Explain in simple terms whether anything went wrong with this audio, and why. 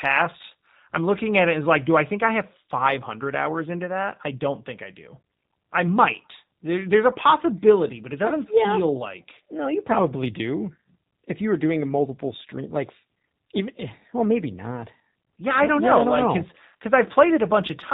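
Something went wrong from start to finish: the speech passed through the G.729 codec, a phone-call compressor that rebuilds a voice from a simple throat model and a few pulses. Unlike plain muffling, it sounds rough, buzzy and slightly robotic, with no brightness above phone range.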